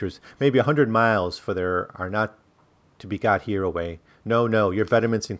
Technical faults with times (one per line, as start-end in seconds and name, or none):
none